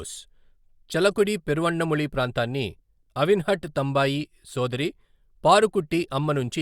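No technical faults can be heard anywhere in this speech recording. Nothing in the audio marks any point as a problem, so there are no times to give.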